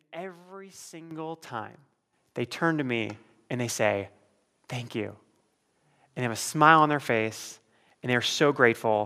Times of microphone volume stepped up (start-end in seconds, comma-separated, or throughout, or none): 1.11, 2.13